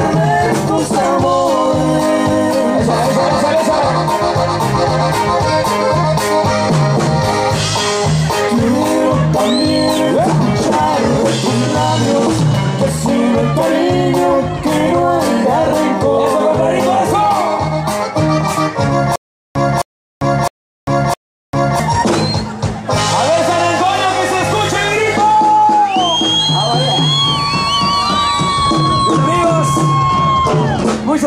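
Stutter with silent gaps, 19.16 to 21.80 s: the same 264 ms fragment plays four times, each followed by 397 ms of digital silence, on an even 660 ms cycle. A stalled stream likely replayed its last fragment at each retry, and the audio due in that span is lost.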